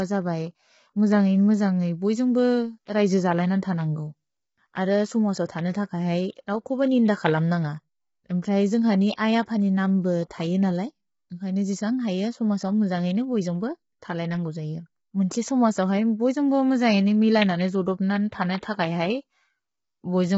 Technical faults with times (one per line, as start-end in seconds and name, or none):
0.00-20.38 low-delay AAC compression
9.15-9.18 pre-echo